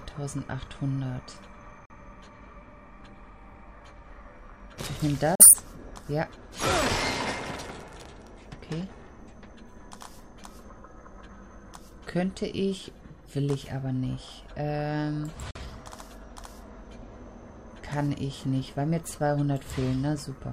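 A digital broadcast dropout occurs three times: the receiver lost its signal or rejected corrupted frames and muted, each time after a quick fade of about 3 ms. The audio vanishes at 1.85–1.95 s, 5.35–5.54 s and 15.51–15.57 s. Each hole fits a single lost frame of 42.7 ms, and whatever was broadcast during it is gone.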